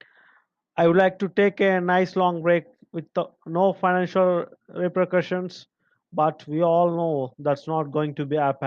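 Nothing in the recording stood out as a technical fault on listening.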